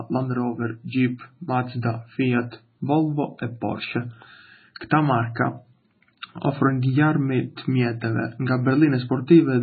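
MP3 compression runs through the whole speech clip, and the heavy damage points to a very low bitrate of around 16 kbps. Starved of bits, the encoder likely removed everything above 4.5 kHz and dropped weaker frequency lines that flicker between frames, leaving a dull, watery, swirling sound with smeared attacks.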